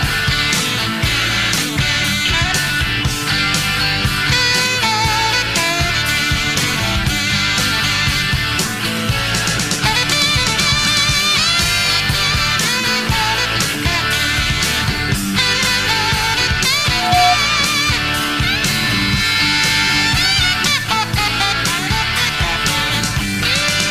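A single pure tone near 718 Hz rises out of the sound at 16.86 s, swells over roughly a third of a second into a squeal that ends up about 5 dB louder than the surrounding audio, and stops at 17.38 s. This is loudspeaker feedback squeal: a microphone was picking up the loudspeaker it was driving, and at 718 Hz the round-trip gain went above one, so that frequency fed on itself and grew.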